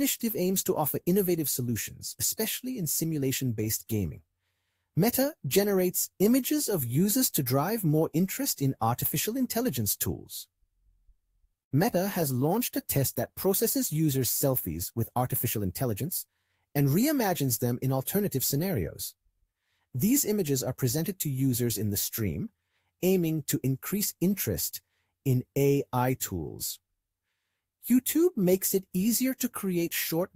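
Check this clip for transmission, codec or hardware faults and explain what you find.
Two transmission faults are audible, and they overlap between 14.93 and 16.03 s.

Call bitrate drop, 12.22 to 16.83 s: the sound turns coarse and loses its top end, staying at its roughest for about 3.3 s before clearing. The sender's bandwidth estimate fell and the encoder was pushed to a much lower rate. The sound fits a drop from around 64 kbps to roughly 28 kbps. At that rate the codec quantises the spectrum coarsely and drops the high band, which gives the muffled, watery texture.

Jitter buffer speed-up, 14.93 to 16.03 s: inside the degraded stretch, the audio runs about 7% fast while its pitch stays the same. Audio had piled up in the receive buffer beyond its target depth. To shed that delay, the receiver cut short pitch-period-sized pieces many times in succession, removing about a tenth of a second in total. 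The result sounds hurried and rhythmically compressed.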